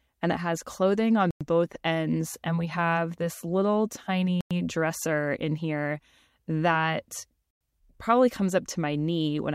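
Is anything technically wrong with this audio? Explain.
Yes, there's a gap between chunks. The speech drops out for 100 ms at 1.31, 4.41 and 7.51 s: short holes arriving every 3.1 s, which points to 3-second chunks with silence inserted at each join. Nothing's missing, it just stalls and resumes.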